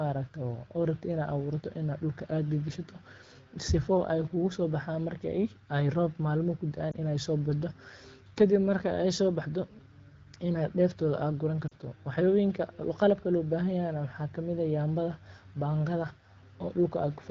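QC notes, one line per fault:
6.92–6.95 s and 11.67–11.76 s: lost AMR speech frames. One 20 ms frame drops first, then two frames (40 ms) in a row. The decoder fills the gaps by repeating its last good pitch and vocal tract settings at falling gain. The single lost frame sounds like a brief dip or warble, and in the two-frame run the voice drops to near silence, then comes back weak or rough for a moment.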